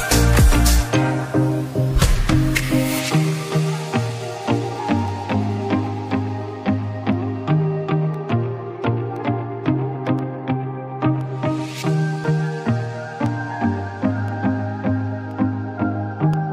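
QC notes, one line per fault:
0.99–16.34 s, periodic USB or driver dropouts. About fifteen regular ticks, one every 1.024 s. Each time, something briefly stalls the USB link or audio driver. Around half a millisecond of audio drops out and becomes silence. That tiny gap clicks against the surrounding signal.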